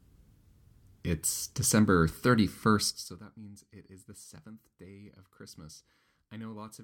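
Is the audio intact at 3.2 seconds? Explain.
No. From 2.80 to 3.24 s the speech carries zipper noise. The level is pulled down by roughly 25 dB in unsmoothed 2 dB jumps, about 30 a second, so each jump leaves a small click and the fade ticks audibly until just before "means it is the". On a waveform the envelope descends as a staircase rather than a slope, and a spectrogram shows faint, evenly spaced vertical broadband lines at each step.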